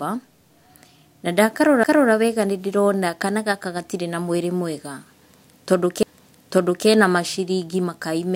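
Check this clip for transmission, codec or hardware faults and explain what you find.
Two CD skips occur, at 1.84 s and at 6.03 s, just before "maciringi makai". In each, the laser jumps to another turn of the disc spiral. A mute of a few milliseconds is heard as a tick, followed by an abrupt jump in the speech. A spectrogram shows a thin vertical gap and a discontinuity in the waveform.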